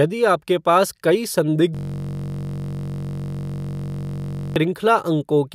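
The system froze in a hang loop in this speech clip. Right after "पास कई", at 1.75 s, the computer or its audio driver locked up while the sound hardware kept replaying the same ring buffer, until 4.56 s. The loop is 21.33 ms long, which fits a 1024-sample buffer, so one tiny slice of audio repeats exactly, more than a hundred times. It comes out as a steady buzz at about 46.9 Hz in place of the speech.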